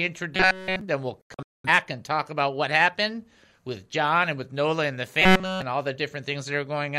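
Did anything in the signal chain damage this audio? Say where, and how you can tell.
Yes. At 0.35 to 0.81 s and 5.22 to 5.62 s, robotic sound from repeated short buffers gives a fixed 188 Hz buzz instead of gaps, likely a driver/buffer underrun looping about 5 ms blocks.

A digital broadcast dropout at 1.21 to 1.69 s mutes 341 ms in several holes, the longest 213 ms, with 3 ms fades. It is silence rather than buzz, so reception or checksum failure.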